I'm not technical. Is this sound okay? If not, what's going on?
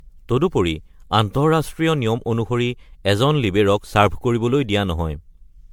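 No, not quite. Across the whole clip the speech has a swirly, hollow quality, and the starts of sounds come out soft and smeared instead of crisp. That's generation loss: the audio was most likely squeezed into a compressed file like an MP3, opened, and saved again, around ten times over. Each round adds its own small damage in slightly different places, so the blur and hollowness keep building up.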